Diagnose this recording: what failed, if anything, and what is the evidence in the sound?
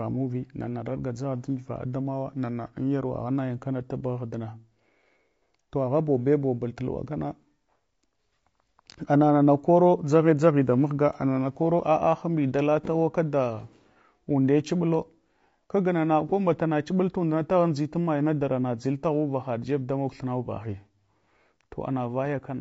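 The speech sounds rough and grainy throughout. Codec stage: likely low-delay AAC compression, whose coarse coding at low bitrates leaves noise between the harmonics, which fits about 32 kbps.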